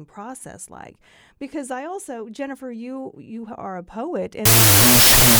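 Wrong sample width from 4.45 s, after "you are a poet": float samples read as 16-bit integers, giving loud noise, buried speech, half speed and lowered pitch.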